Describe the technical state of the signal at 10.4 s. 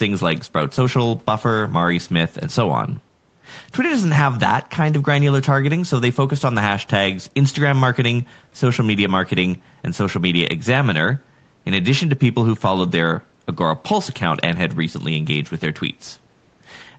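At 10.4 s the speech signal is intact, with no fault present, just the expected call microphone processing that trims the lowest bass and leaves nothing above 8 kHz.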